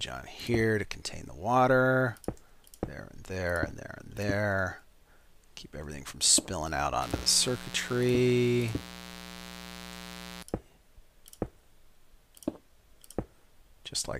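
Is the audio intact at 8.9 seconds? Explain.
No. From 7.02 to 10.43 s, switching spikes from a dimmer, rectifier or unshielded line leak into the signal path twice per 60 Hz mains cycle, producing mains buzz: a steady, raspy drone rich in 60 Hz harmonics, sitting roughly 15 dB below the audio.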